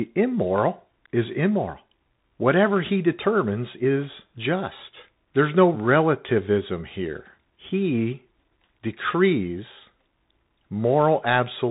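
Speech that sounds thin and boxed-in from start to finish, with nothing above about 3.8 kHz, scratchy s sounds and a gritty hiss under the voice: the Bluetooth CVSD headset codec, whose one-bit slope coding (which fits a 64 kbps link) cannot track fast high-frequency changes.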